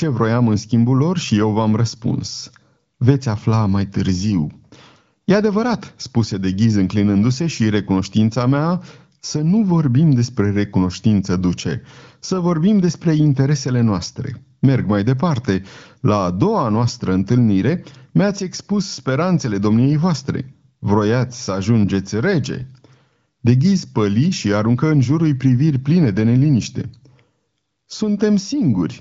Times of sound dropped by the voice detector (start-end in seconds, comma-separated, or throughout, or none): none